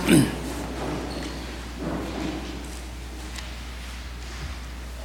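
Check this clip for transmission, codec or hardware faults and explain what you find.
There is one fault, a mains hum, present from start to finish. A steady, low 60 Hz drone sits underneath the whole clip, fairly prominent at roughly 10 dB below the wanted signal, so it is easily heard in quieter moments. The power line's alternating current is leaking into the signal path, most plausibly through a ground loop between connected equipment or magnetic coupling from a nearby transformer, and the 60 Hz figure points to a North American–style supply.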